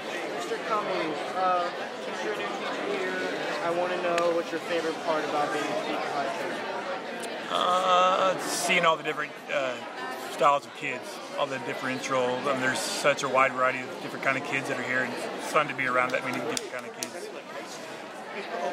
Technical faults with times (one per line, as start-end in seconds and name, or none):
none